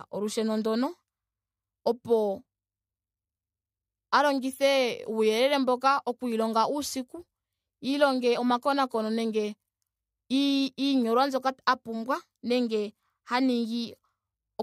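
Nothing along the way catches the ear as a fault, so there's nothing here to point to or explain.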